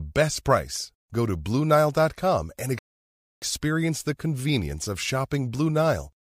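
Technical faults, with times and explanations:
2.79 to 3.42 s, rebuffering stall: the speech halts into 0.63 s of silence, then resumes exactly where it left off, because the player ran out of downloaded audio.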